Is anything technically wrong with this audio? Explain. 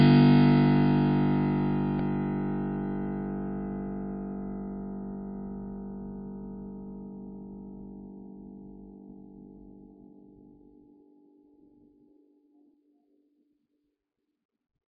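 Yes, there are two faults.

Throughout, the music sounds watery and dull, with nothing above 5.1 kHz. This is likely MP3 compression at a very low bitrate, which zeroes weak frequency lines and drops treble.

At 1.99 s there is a repeated buffer. A tiny slice of audio plays three times with hard joins, heard as a brief click. Its length fits a 64-sample buffer.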